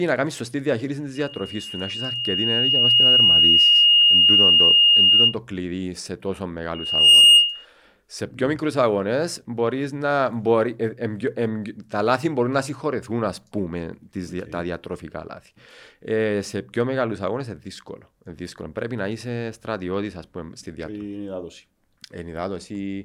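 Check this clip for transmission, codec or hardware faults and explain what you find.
There is one fault, occurring twice. Loudspeaker feedback squeal, from 1.15 to 5.36 s and from 6.74 to 7.66 s: the microphone re-captures its own loudspeaker, and the loop gain exceeds one at 2.8 kHz. That pure tone swells over about two seconds, then in under half a second the second time, peaking roughly 10 and 15 dB above the speech.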